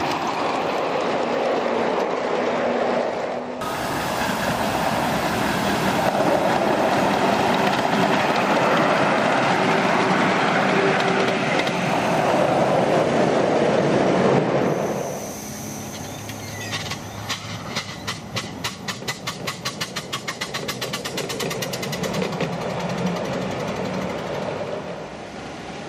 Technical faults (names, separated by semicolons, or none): none